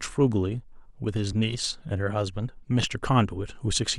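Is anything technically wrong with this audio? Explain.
Yes, there are two repeated buffers in this speech, at 1.33 s (played three times) and 2.87 s (twice). Late audio made the device replay a 2.67 ms block, which fits a 128-sample buffer, giving brief buzzy clicks. Waveforms show identical copied segments with hard joins; spectrograms show thin vertical lines.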